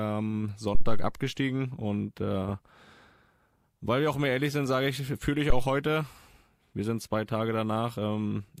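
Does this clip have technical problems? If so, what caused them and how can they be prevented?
Yes, there are two phantom power thumps in this speech clip. The first runs from about 0.75 to 1.16 s, just before "und äh", and dies away over roughly 93 ms. The second sits at 5.50 to 5.69 s, right after "sage ich fühle ich", with a quicker 42 ms decay. Both peak around -11 dBFS. That's phantom or another supply being switched on a live input, with the voltage step pushed through the coupling capacitors as a deep thump. To prevent it, mute or pull the channel down before toggling phantom and let it settle before unmuting.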